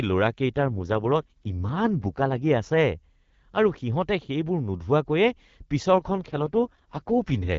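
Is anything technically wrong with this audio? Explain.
Yes. There are two AMR rate drops, from 0.56 to 2.47 s and from 5.94 s to the end at 7.58 s. The codec appears to have been pushed from the wideband rate down to its lowest mode, which fits 12.65 falling to 6.6 kbit/s. With fewer bits for the speech itself, the voice turns rough, raspy and synthetic, while the bandwidth holds and no gaps appear.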